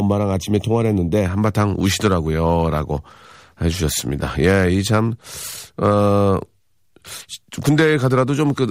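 Speech, with channel delay (comb filtering) from 0.00 to 1.25 s: one channel arrives roughly a third of a millisecond late, and the mono sum cancels shared content at regularly spaced frequencies, the first around 1.5 kHz and repeating further up. The opening sounds hollow and phasey, then clears. A spectrogram would show fixed horizontal dark bands through the harmonics over that stretch, while the waveform itself looks largely unremarkable.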